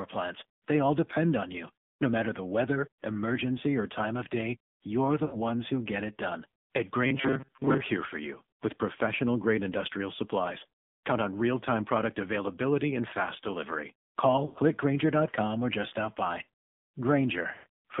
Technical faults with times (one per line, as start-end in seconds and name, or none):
0.00-18.00 AMR narrowband mobile codec
5.26-5.38 lost AMR speech frames
7.06-7.81 robotic sound from repeated short buffers
14.46-14.58 lost AMR speech frames
17.54-17.67 lost AMR speech frames